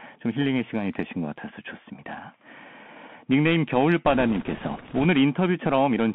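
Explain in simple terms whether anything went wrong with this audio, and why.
Yes, two things went wrong. The whole recording sounds thin and muffled, with s sounds turned scratchy and a grainy hiss under the speech. That is the Bluetooth CVSD headset codec, a narrow phone-style format that keeps nothing above about 3.4 kHz and roughly approximates each sound.

From 4.06 to 5.05 s, a rushing, crackly noise washes over the speech without any sharp clicks. These are bit errors on a Bluetooth voice link: a few percent of the transmitted bits arrived flipped, and each wrong bit nudges the sound slightly off course.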